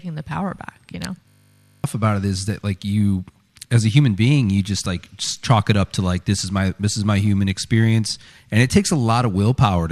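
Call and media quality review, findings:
System hang loop, 1.28 to 1.84 s, right after "power back you know". Steady 50 Hz buzz replaces the sound. A 20 ms slice repeats 28 times while the driver or host stalls and the audio hardware keeps replaying its ring buffer. Roughly half a second of real audio is gone, and it resumes at "about it is that". Probable component: audio driver or OS scheduling.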